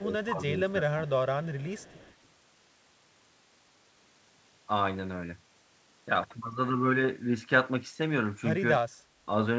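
Speech suppressed in double talk affects the opening, from 0.0 to 0.1 s and again from 0.32 to 0.4 s. In each brief stretch the level falls by about 10 dB. The likely cause is an echo canceller that heard both sides at once, could not tell its own talker from loudspeaker echo, and turned everything down. The dips are short, so the sound ducks in quick pieces.

Echo leak runs from 1.44 to 2.28 s. A faint copy of the speech trails the original by 279 ms, sitting roughly 30 dB below it. One side was likely playing the call on a loudspeaker, and its canceller let part of the microphone pickup through and sent it back. Through it all the band stops at 8 kHz, as expected from G.722 at 64 kbps.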